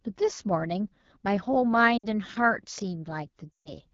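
Throughout, the speech sounds rough and raspy: AMR wideband (HD Voice) codec damage, pointing to one of its lowest rates, around 8.85 kbit/s. From 1.97 to 2.05 s and again from 3.52 to 3.74 s, the sound smears and fades toward silence. These are lost AMR speech frames, where the decoder stretched the last good frame with falling gain for about 60 ms and then 140 ms.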